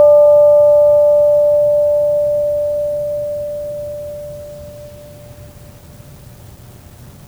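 No faults detected anywhere in the music.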